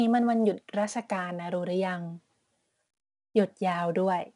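Speech carrying 4-bit ADPCM compression throughout, with plainly audible damage. Each sample is coded as a coarse 4-bit step from a predicted value, so the error becomes a gritty hiss that rises and falls with the voice and sits on every loud syllable, roughening sharp onsets where the step size lags. Nothing is present above 10.6 kHz, which points to about a 22 kHz sample rate and a stream near 88 kbps.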